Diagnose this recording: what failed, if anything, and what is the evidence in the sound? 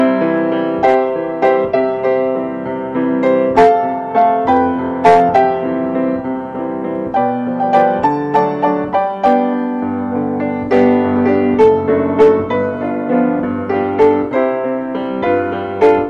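Faint, evenly spaced ticks run from 0.38 s to 15.8 s, roughly every 0.4 s and about forty in all. These are clock slip clicks at the converter stage, likely from two unsynchronised clocks about 50 ppm apart, each slip dropping or repeating one sample.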